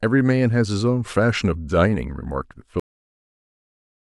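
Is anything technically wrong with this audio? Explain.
Yes, there's a cut-off end. At about 2.80 s the speech stops mid-sound and falls straight into digital silence with no natural decay. The last stretch of audio buffers evidently never got written or played out, so everything after that point is simply missing.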